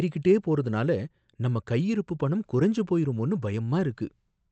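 A speech clip with no technical faults to report.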